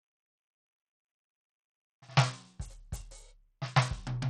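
From start to finish the music carries plainly audible codec damage that points to Bluetooth SBC compression, with a starved bit allocation consistent with about 80 kbps. Treble flickers in and out, and gritty noise rides underneath. A spectrogram shows patchy, blocky high bands.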